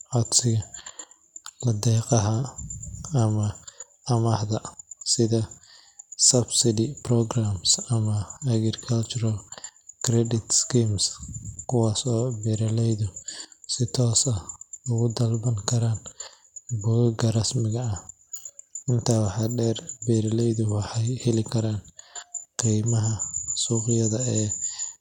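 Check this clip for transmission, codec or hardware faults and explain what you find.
Nothing stood out on listening to the speech in this recording.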